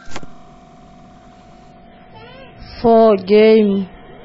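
Speech recording. From 1.72 s to the end, an adaptive stream at a lower bitrate takes over. Everything above 5.5 kHz vanishes suddenly, without a gap. That fits a 16 kbit/s MP3 version.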